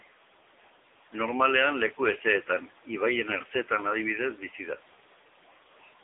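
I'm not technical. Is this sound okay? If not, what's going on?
No. The speech went through the AMR narrowband mobile codec, the older phone-network system, squeezed hard into very little data. It keeps only a narrow slice of sound, roughly 300 Hz to 3.7 kHz, and rebuilds the voice from a simplified model of the mouth and throat. For the whole clip, that makes the voice thin, muffled and phone-like, with nothing above 3.8 kHz, and heavily buzzy and synthetic-sounding.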